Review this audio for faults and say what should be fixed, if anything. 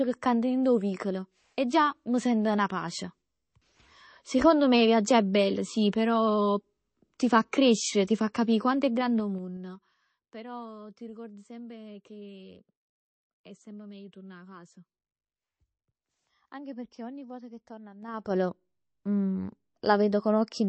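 Throughout the speech there is a watery, swirly texture and nothing above about 8.3 kHz, plainly audible damage that points to MP3 compression, likely at a low bitrate around 32 kbps. Unlike a simple low-pass filter, the swirling comes from weak frequency lines flickering between frames. Encode at a higher bitrate or keep an uncompressed source.

Zipper noise runs from 8.92 to 10.12 s as the level drops by roughly 20 dB in 3 dB steps, about five per second, and again from 18.0 to 18.36 s as it rises roughly 20 dB at about twenty steps per second. Each unsmoothed step clicks, giving a ticking. Ramp gain changes per sample.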